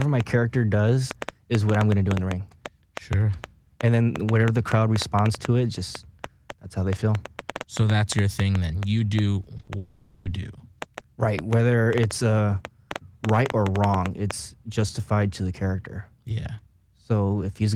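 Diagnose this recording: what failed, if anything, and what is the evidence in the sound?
A train of clicks runs from 0.02 s to about 14.3 s. The pulses arrive at about 4.7 per second with irregular spacing, roughly seventy in all. They peak around 15 dB above the speech and keep ticking through the pauses. They share much the same shape, so a single source is injecting them. The likely stage is analogue wiring or the converter interface, picking up interference from nearby equipment.

Short concealed packet loss hits three times in a row, at 9.57 s, 9.61 s and 9.65 s, ending at 9.69 s. Each event fills about 20 ms of missing audio. The decoder extends the last sound, pitched if voiced and as shaped noise if not, then blends back. The result is a rapid smear or wobble. The fault sits in the network stage, with concealment in the codec.

A long network dropout follows from 9.77 s to 10.27 s. 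About 480 ms of audio never arrived. The receiver held the last sound as a fading buzz or hiss across the whole gap, without reaching silence. The speech then resumes with that half second missing. Coming straight after the short losses, this is most likely a network outage, covered by extended concealment.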